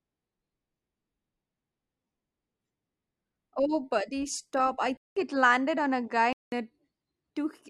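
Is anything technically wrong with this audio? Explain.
Yes. An input switched to a poorer device runs from 4.97 to 6.52 s, just after "buddy stop I": the recording likely moved to a narrower-band microphone, cutting everything above 9.3 kHz so the speech turns duller, with a silence of about 190 ms at the switch, faint new background noise and no level jump.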